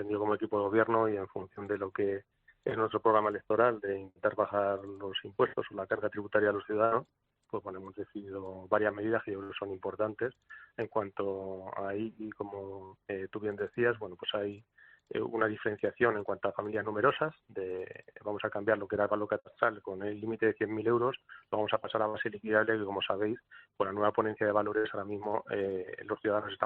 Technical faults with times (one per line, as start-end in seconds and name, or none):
4.09-4.23 burst of packet loss
6.85-6.94 burst of packet loss
9.43-9.52 burst of packet loss
12.85-12.94 burst of packet loss
19.39-19.48 burst of packet loss
22.09-22.17 burst of packet loss
24.78-24.87 burst of packet loss